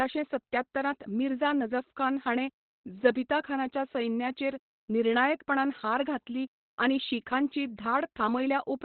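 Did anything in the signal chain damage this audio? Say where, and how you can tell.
Yes, at the codec stage: the speech was likely squeezed through Opus compression in its SILK speech mode, at a rate that fits roughly 12 kbps. Throughout, nothing survives above about 4.3 kHz, so the narrowband result sounds muffled, hoarse and heavily degraded.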